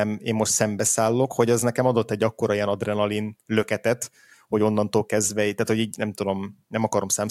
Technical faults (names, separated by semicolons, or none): none